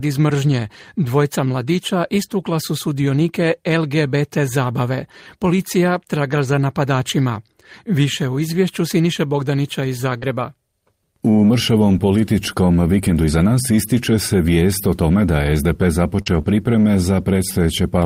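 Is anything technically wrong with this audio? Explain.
Yes, there are two kinds of network fault, and they cluster around 10.2 s and 16.2 to 16.5 s.

The first is a lost packet rebuilt from error correction, at 8.35 to 8.41 s (40 ms), 10.22 to 10.24 s (20 ms), 16.26 to 16.40 s (80 ms) and 16.45 to 16.51 s (40 ms). Those lengths fit runs of 20 ms packets going missing. The packet following each one carried a low-bitrate backup copy, and the decoder played that instead, so there's no gap. Those stretches just come out rougher and noisier than the audio around them.

The second is short concealed packet loss, at 10.17 to 10.24 s, 16.22 to 16.28 s (each about 40 ms missing) and 16.42 to 16.45 s (20 ms missing). Here the audio never arrived in time, and there was no backup to fall back on. The receiver improvised by extending the last sound, following its pitch where it was voiced or using shaped noise where it wasn't, then blended back into the real signal. 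You hear it as a brief smear or wobble.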